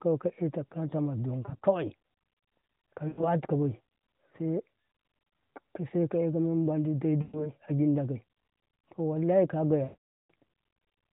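Speech over the AMR narrowband codec with lost AMR speech frames: corrupted frames made the decoder repeat its last pitch and vocal tract settings at falling gain, giving brief warbles at 1.46–1.65 s and 3.08–3.25 s and at 7.22–7.52 s after "mem ma di dai", then a drawn-out fade to silence at 9.84–10.31 s.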